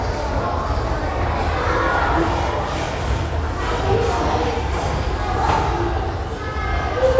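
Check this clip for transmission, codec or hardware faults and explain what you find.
No faults can be heard anywhere in this audio. There is nothing here that needs explaining.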